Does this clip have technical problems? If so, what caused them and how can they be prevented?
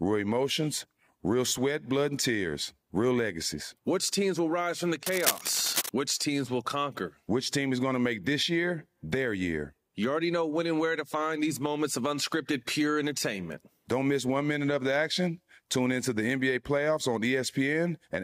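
Yes. From 5.06 to 5.89 s, a burst of cable scratch noise rides over the speech: dense, irregular scratching and rustling only slightly quieter than the speech itself. The likely cause is a worn cable, connector or control being moved, so its contact resistance jumps about rapidly and injects noise. Unlike isolated clicks or a steady hum, it is a short, uneven cluster tied to physical handling. Replacing worn leads and securing cables so they cannot move during recording would prevent it.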